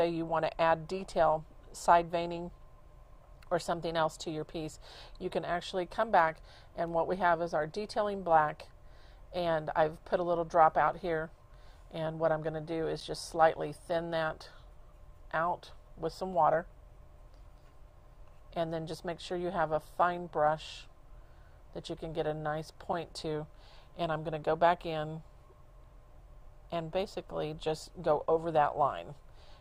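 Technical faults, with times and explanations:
13.00 s and 22.93 s, gap at a join of encoded pieces: the audio was encoded as separate pieces and butted together without removing each encoder's start-up delay or the padding on its final frame, so a short stretch of silence sits at each seam. The sound drops out for about 9 ms at the first join and about 6 ms at the second, with smeared edges, then resumes exactly where it stopped.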